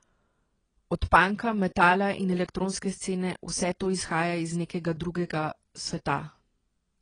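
Speech, with plainly audible codec damage from start to end. It sounds dull and smeared, nothing above 10 kHz. Likely AAC compression, consistent with AAC-LC near 24 kbps.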